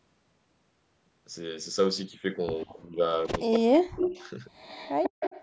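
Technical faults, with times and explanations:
2.61–2.73 s, 3.26–3.58 s, 4.04–4.30 s and 4.56 s to the end: echo leak. A delayed copy of the speech trails it by 144 ms. It is faint at first, then nearly as loud as the talker in the third stretch. The likely cause is a loudspeaker echo that the far end's canceller failed to remove and sent back.
2.66–3.01 s and 3.45–4.21 s: speech suppressed in double talk. The talker's speech dips sharply while the echo overlaps it, falling by about 25 dB in the first stretch and about 40 dB in the second. The echo canceller likely couldn't separate the two and turned both down.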